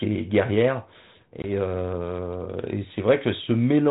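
A speech clip carried over 32 kbit/s G.726 ADPCM shows packet loss on an ADPCM call at 1.42 s: a hard-edged 20 ms silent gap, about one packet, then speech returning slightly distorted until about 1.49 s. A plain dropout would resume cleanly; here the decoder's predictor and step size fell out of step with the sender's and needed that time to re-converge.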